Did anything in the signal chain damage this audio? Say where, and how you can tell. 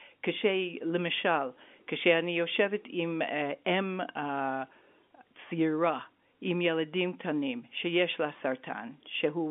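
No, nothing in the chain damaged this speech; it carries the ordinary character of G.711 A-law telephone coding at 64 kbps, with the band held to roughly 200 Hz to 3.5 kHz and only the faint, level-following quantisation hiss that this format always leaves.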